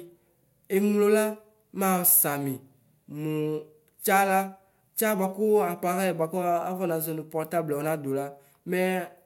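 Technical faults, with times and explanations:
No technical faults can be heard in this speech recording.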